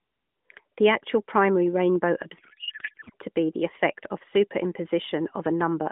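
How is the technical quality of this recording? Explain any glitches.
The recording passes through a narrowband AMR mobile link, with nothing above about 3.5 kHz and light codec colouring that fits a 12.2 kbps mode. One clear glitch interrupts it.

From 2.38 to 3.15 s, after "actual primary rainbow" and before "to be the effect", a codec payload misread replaces the speech with garbled warbling noise. The sound points to octet-aligned AMR frames decoded as bandwidth-efficient, which shifts every field out of place. Unlike a packet-loss dropout, which leaves silence or smeared concealment, the decoder keeps producing sound here, but it barely tracks the speech.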